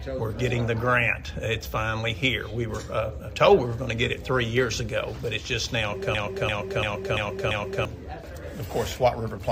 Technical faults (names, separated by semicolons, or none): system hang loop